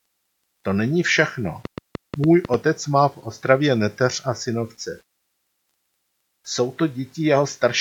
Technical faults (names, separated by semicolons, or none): train of clicks